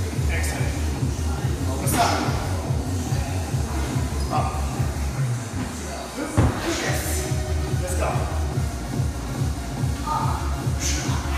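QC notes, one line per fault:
No faults found. Nothing in the audio calls for a timestamp or a note.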